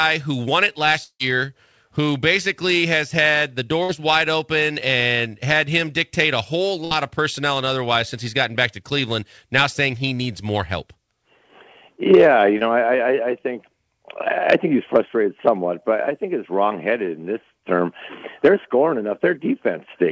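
A long network dropout, likely the cause, runs from 1.04 to 1.21 s. The last sound is stretched into a fading buzz or hiss for about 155 ms, then about 60 ms of silence follows. The audio resumes further on, with about 160 ms skipped.

A burst of packet loss hits at 3.83 to 3.91 s and again at 6.85 to 6.93 s. Each time about 60 ms never arrives, so the receiver holds the preceding sound and turns it down as a dying buzz or hiss before the audio jumps ahead past the gap.

A short concealed packet loss occurs at 12.59 to 12.63 s. About 20 ms was late or lost, and the receiver patched it by extending the previous sound and blending back in, leaving a brief smear or wobble. Throughout the clip nothing is heard above 8 kHz, which fits a wideband call codec such as G.722.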